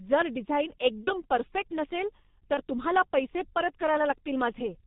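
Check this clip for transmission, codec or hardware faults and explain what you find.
The speech passes through a heavily compressed low-rate telephony codec and suffers two brief packet-loss dropouts.

G.723.1 codec: Throughout, the speech runs through G.723.1, a 30 ms-frame internet-telephony codec. Its coarse coding fits its 6.3 kbit/s mode. Nothing above 4 kHz survives, and the vocal-tract model is refreshed only once per frame, so rapid articulation gets smeared. The damage is heavy: the voice sounds muffled and hoarse, with consonants blurred.

VoIP packet loss concealed by the speech codec: At 1.04 to 1.22 s, just before "परफेक्ट नसेल", and at 2.54 to 2.62 s, between "परफेक्ट नसेल" and "तुम्हाला पैसे परत", a packet went missing. Each gap sounds like a single lost 30 ms frame. The decoder filled each gap by extending its last pitch and filter with falling gain, so the sound is stretched out and fades. 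Because each frame builds on the previous one, the speech stays weak and distorted for a while after the loss.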